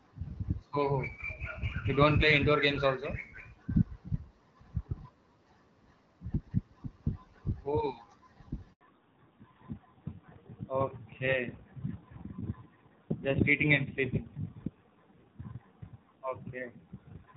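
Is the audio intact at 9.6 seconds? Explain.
No. From 8.81 s to the end, the call has fallen back to narrowband. It leaves the HD Voice wideband codec for an older narrowband one, which fits a low-rate AMR mode. Nothing above 4 kHz survives, so the speech sounds duller and rougher.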